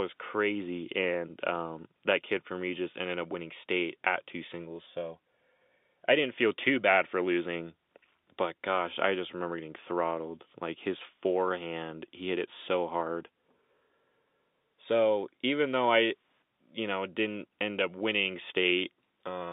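Nothing goes wrong in this speech clip; it's just ordinary telephone-band audio of the G.711 kind, with the sound sitting between roughly 200 Hz and 3.7 kHz as you'd expect from a landline call.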